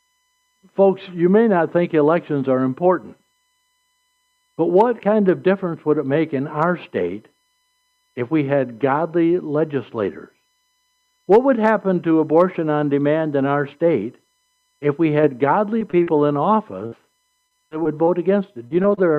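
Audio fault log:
15.21–16.08 s: repeated packet loss (robotic sound). Brief holes of up to 35 ms keep recurring, each filled by stretching the preceding sound, so the audio turns choppy with pieces missing. It differs from a single dropout because the holes come in a quick series.
16.86–18.99 s: repeated packet loss (robotic sound). A longer run with gaps up to 52 ms gives choppy sound with pieces missing, unlike simple clicks or fades.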